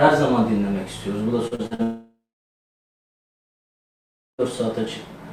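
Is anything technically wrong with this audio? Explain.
Yes. From 1.47 to 1.82 s, repeated packet loss (robotic sound): four short gaps, none longer than about 42 ms, are patched by extending prior sound, leaving choppy sound with pieces missing.

From 1.83 to 4.41 s comes a long network dropout, likely an extended interruption of arriving audio. Unlike the brief repeated patches, the fill fades into roughly 2.2 s of silence before sound resumes with that stretch missing.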